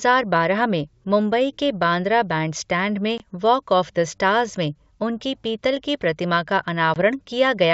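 Speech clip carried over G.722 wideband telephone coding with two instances of packet loss on an ADPCM call, at 3.18 to 3.23 s and 6.94 to 6.98 s. Each is a hard-edged gap of about 20 ms, which fits a single lost packet. Silence fills the hole, and the decoder's adaptive predictor and step size drift out of step with the sender's. The speech then resumes with brief, slight distortion before it settles.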